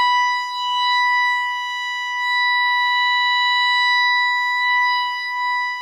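No technical faults can be heard in this music. There are no events to place in time.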